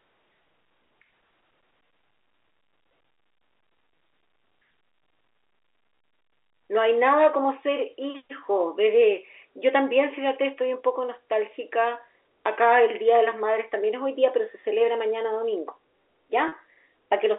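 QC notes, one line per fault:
16.48–16.52 s, packet loss with pitch repetition: about 40 ms of signal went missing, which fits two lost 20 ms packets on this G.711 telephone line, and the receiver filled the gap by repeating the last pitch period. The result is a brief held, slightly buzzy tone. The waveform shows identical repeated cycles with a gently falling envelope, and the spectrogram shows harmonics frozen into flat horizontal stripes before normal pitch movement returns.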